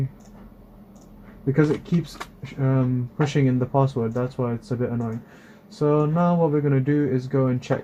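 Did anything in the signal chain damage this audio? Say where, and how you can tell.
Yes. Clock slip clicks run from 0.11 s to 7.83 s, recurring roughly every 20 ms, hundreds in all, so they blend into a soft continuous rattle rather than separate ticks. The fault likely sits at a converter or driver handoff between two free-running clocks that are never synchronised. With a mismatch of around 1000 ppm, the drift reaches a whole sample about every 20 ms, and each time a single sample is dropped or repeated, leaving a tiny discontinuity in the waveform.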